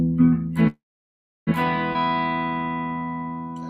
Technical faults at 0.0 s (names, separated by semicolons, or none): none